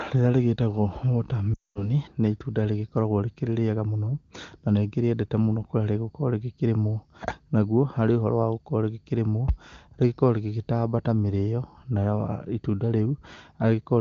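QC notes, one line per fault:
1.54–1.91 s, lost AMR speech frames: just after "rĩrĩa rĩgĩtagwo water" the sound drops to near silence within two frames. The wideband decoder repeats its last good pitch and vocal tract settings with falling gain. The 220 ms gap fits about eleven failed frames.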